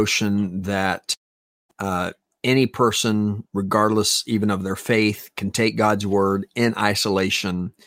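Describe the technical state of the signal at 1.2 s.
At 1.2 s the signal is inside what is likely a long network dropout, running from 1.13 s to 1.71 s, when incoming audio stopped for about 0.56 s. The receiver briefly stretched the last received sound into a fading buzz or hiss, then fell silent for roughly 0.52 s of the gap. When the speech returns at 1.71 s, it picks up further along, and the missing stretch of speech is simply gone.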